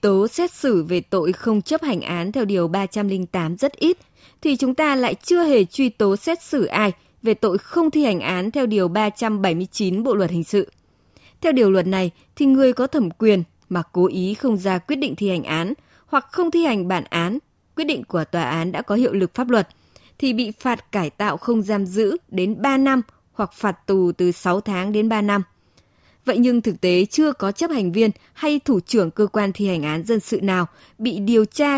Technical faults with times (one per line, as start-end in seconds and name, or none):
none